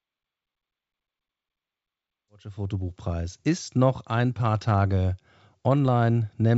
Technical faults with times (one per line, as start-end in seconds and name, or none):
none